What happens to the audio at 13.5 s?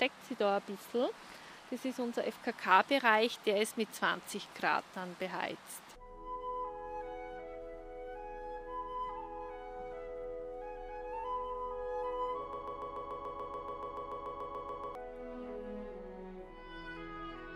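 A stall, likely in the player, encoder or stream, kept resending the last fragment it held: a broken-record loop from 12.53 to 14.95 s. One 144 ms slice repeats exactly, back to back, 17 times, and the audio meant for that stretch is lost.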